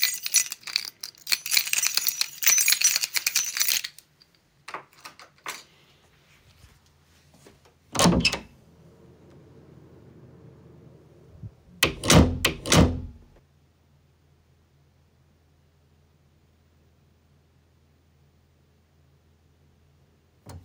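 From 11.97 to 13.39 s, a doubled audio track appears, likely from a slower second capture path feeding the same sound into the mix. A full-band copy trails the original by about 0.7 seconds at roughly equal loudness, with no room decay, cutting in and out abruptly.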